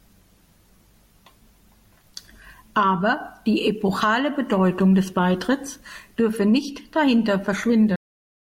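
A cut-off end at 7.96 s stops this speech recording mid-sound, just after "dürfe nicht dahinter". The final buffers were never written or played back, so the sound drops straight to digital silence with no natural decay, and that silence runs through to the end.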